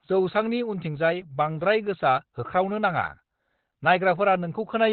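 From start to finish the speech sounds muffled, hoarse and boxy, with the top end gone. This is heavy damage of the kind Opus compression produces when it is starved of bits: at a rate that fits about 12 kbps the encoder has likely dropped into its narrowband speech mode. On a spectrogram, energy stops abruptly around 4 kHz, leaving the region above nearly empty for the whole clip.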